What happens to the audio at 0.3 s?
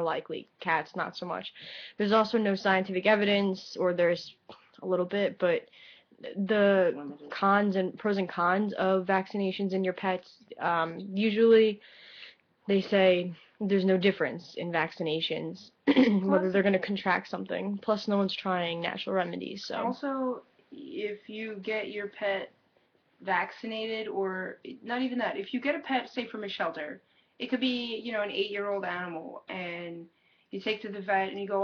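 Nothing goes wrong at 0.3 s; the audio plays through that moment intact.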